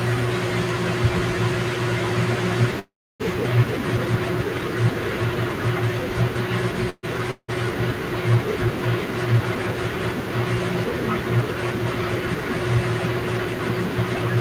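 At 2.79 to 3.22 s and again at 6.90 to 7.05 s there is a call audio freeze: the last sound hangs as a fading buzz, about 300 ms of silence in the first and only 30 ms in the second, then resumes exactly where it stopped. Packets were likely held up until the jitter buffer ran dry.

At 7.31 to 7.50 s a long network dropout sounds similar, with a fading buzz and 60 ms of silence, but the audio returns further on. About 240 ms was likely never received and is skipped.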